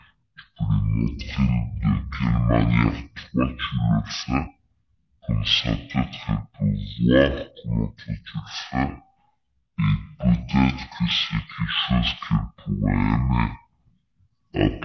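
From start to finish the speech runs at half speed and a full octave low, 12 semitones down: the wrong sample rate. The samples play out at half the pace they were captured, which fits audio recorded at 32 kHz being played at 16 kHz with no conversion. What separates this from a pitch shift or a time stretch is that pitch and tempo fall together by the same ratio, leaving no processing artefacts.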